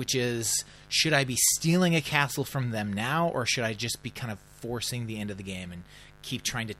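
From start to finish, mains buzz sits under the speech: 50 Hz switching spikes, twice per cycle, leaking in as a raspy hum roughly 25 dB down. A spectrogram shows evenly stacked horizontal lines at 50 Hz multiples; the waveform carries sharp spikes every 10 ms.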